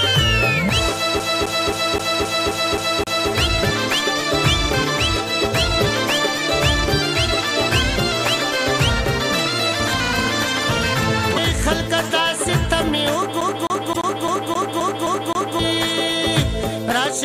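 A disc stuck on one turn, with the laser thrown back a track on every revolution, makes the audio from 1.19 to 3.30 s and from 13.41 to 15.59 s stutter: the same 263 ms slice plays 8 and then 9 times, with a brief mute at each jump. At 11.35 to 11.38 s and again at 13.94 to 13.97 s, inside the second skip, there is a short glitch lasting about one 26 ms frame. It is most likely a broken MP3 bit reservoir, where a frame after a cut reaches back for borrowed data and decodes bytes from the wrong frame.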